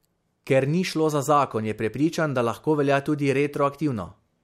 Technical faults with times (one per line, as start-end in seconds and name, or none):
none